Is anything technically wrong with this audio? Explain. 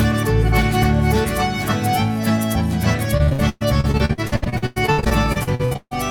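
Yes. Repeated packet loss (robotic sound) runs from 3.17 to 5.96 s: packets drop out again and again, each hole patched by stretching the last sound, with the longest gap 144 ms and about 41% of that stretch filled in, giving choppy audio with pieces missing.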